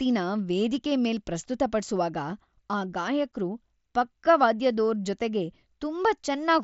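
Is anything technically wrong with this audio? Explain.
No, the speech signal is intact, carried over what sounds like a wideband Bluetooth headset link using the mSBC codec, with the audio band reaching up to about 8 kHz and only the light graininess on louder moments that this codec leaves behind.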